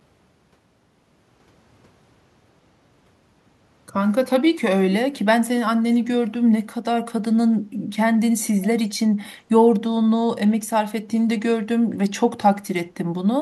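Echo leak, from 5.91 to 5.99 s: a brief, very faint copy of the speech surfaces, trailing the original by about 473 ms and sitting roughly 30 dB below it. The likely cause is a far end playing the call over a loudspeaker, where the echo canceller failed to strip out everything its microphone caught, so a residue of this side's speech was returned. Here it is only a short scrap rather than a sustained repeat.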